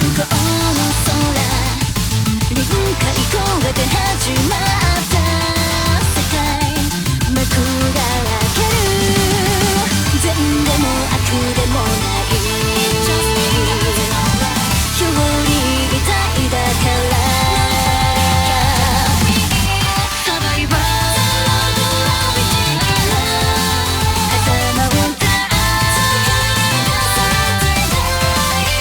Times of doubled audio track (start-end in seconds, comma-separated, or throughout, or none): none